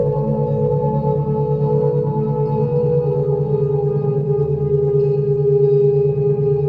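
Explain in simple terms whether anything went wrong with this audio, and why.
Nothing went wrong here: there's no glitch, dropout or other technical problem to point to anywhere in the recording.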